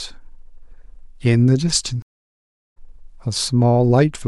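At 2.02 s the speech cuts out abruptly. Silence lasts about 740 ms, until 2.78 s. This is a stream reconnect. The connection dropped, the player stopped, then it rejoined the stream and started a fresh decoder. The gap does not pick up where it left off. The speech resumes roughly half a second further on, so a short stretch is simply missing. The result sounds like a hard dropout followed by a jump forward.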